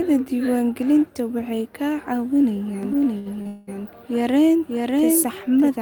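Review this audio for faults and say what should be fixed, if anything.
A second copy of the audio, likely from a slower capture path or an edit holding two copies out of step, runs from 2.83 s to 5.68 s. It trails the original by roughly 0.7 s at about 5 dB lower, full-band and dry, cutting in and out abruptly as a doubled audio track. Prevent it by routing the source through only one capture path and checking edits for duplicate, misaligned copies.

Between 2.93 s and 3.47 s, packets arrived late or too slowly and the jitter buffer ran dry four times. The receiver covered each gap, the longest 75 ms and 138 ms in total, by extending the last sound. This produces repeated stalls (stutter) that drag the speech without losing any of it. Prevent it with a more stable network link and a jitter buffer that adapts its depth to the arrival variation.

From 3.47 s to 3.69 s, the packet flow most likely stopped and emptied the buffer. 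The receiver held the last sound for about 201 ms before resuming exactly where it left off. This call audio freeze inserts a gap without dropping anything. Prevent it by fixing the network stall at its source and sizing the buffer to ride out delays of this length.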